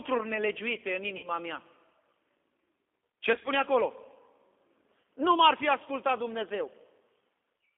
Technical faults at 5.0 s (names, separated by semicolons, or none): G.729 codec; VoIP packet loss concealed by the speech codec